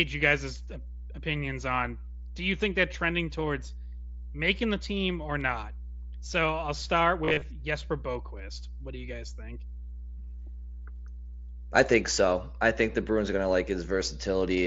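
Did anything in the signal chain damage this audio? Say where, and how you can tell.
Yes. A steady low tone at 60 Hz sits under the speech for the whole clip, with some low harmonics above it. It is loud, only about 10 dB below the speech, so it fills every pause. This is mains hum, picked up in the analogue wiring. A ground loop or a nearby transformer is coupling the power line into the signal before conversion, and the hum rides along unchanged through everything downstream.

Right after "I'll start", from 7.25 to 7.42 s, the speech turns briefly buzzy and smeared. Short stretches sound held or repeated rather than spoken, and there is a slight warble as normal audio returns. This is concealed Bluetooth headset packet loss on the wireless link between headset and phone. About 112 ms of audio went missing, scattered across 165 ms, with the longest gap 30 ms. The receiver filled each gap by repeating the closest-matching piece of the waveform just before it.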